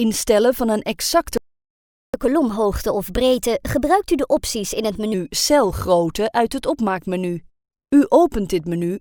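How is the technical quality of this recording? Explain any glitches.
The recording has two linked playback faults in its first 5.1 seconds.

At 1.37 s a playback stall begins. The sound stops in mid-flow and the output goes silent for about 0.76 s, until 2.14 s. It then resumes. The likely cause is the player running out of buffered data, or its thread being blocked. Nothing reached the output during that gap. The result is a clear hole in the sound.

From 2.14 s to 5.14 s there is catch-up at higher speed. The player works through its backlog by resampling it faster, at 1.15 times normal speed. This wins back part of the time lost in the stall. Because resampling changes speed and pitch together, everything sounds hurried and raised by roughly two semitones. At 5.14 s both drop back to normal.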